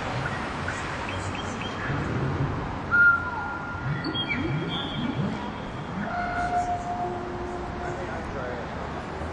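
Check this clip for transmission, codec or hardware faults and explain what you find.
No fault can be heard anywhere in this clip. There is nothing in it that calls for an explanation.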